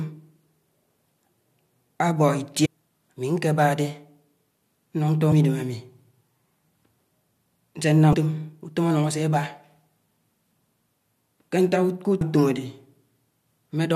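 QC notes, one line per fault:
2.64–2.67 s, 5.31 s, 8.13 s, 12.20 s: damaged data in a compressed stream. Corrupted bytes break frame decoding, so the decoder loses sync and hunts for the next header, giving brief glitches in the speech, the second just before "idem ami", the third just before "utom anung ásè aba".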